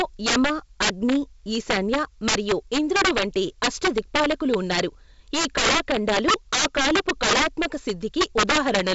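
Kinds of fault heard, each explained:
Integer overflow: driven about 13 dB too hot, roughly one sample in twenty wraps to the opposite sign, giving violent cracks on loud speech throughout.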